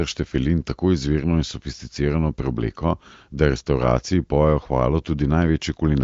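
No technical faults can be heard in this speech, which comes through an AMR wideband (HD Voice) codec path.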